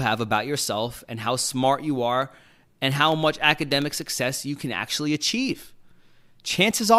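From 2.22 s to 4.02 s the speech carries periodic USB or driver dropouts. Every 0.1 s, something briefly stalls the audio path. A sliver of signal, far shorter than a millisecond, is lost and replaced by silence. About twenty of these gaps fall in the span. Each one makes a tick. The ticks arrive at a steady ten per second and sound only while the speech is present.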